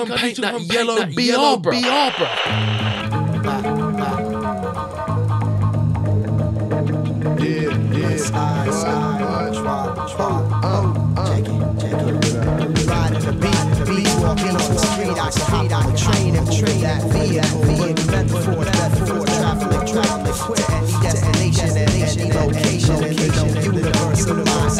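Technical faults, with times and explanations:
Throughout, doubled audio track: a second copy of the signal is likely being captured through a slower path and mixed back in, so every sound repeats about half a second later at roughly the same level, full-band and dry, with no decay or room colour.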